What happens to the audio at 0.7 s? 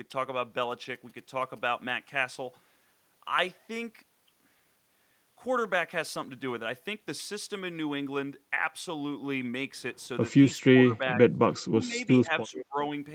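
GSM signalling bursts sit under the speech from 0.63 to 1.91 s. A nearby 2G phone is signalling, and the audio circuit rectifies its radio bursts. The result is a galloping dit-dit-dit of short 217 Hz buzzes, well below the speech.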